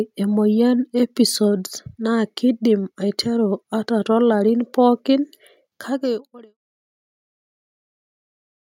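No faults are audible in the speech, and the level eases down from around five and a half seconds to silence at 6.58 s with no click or hard edge.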